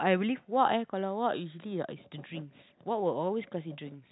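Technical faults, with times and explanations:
No technical faults found.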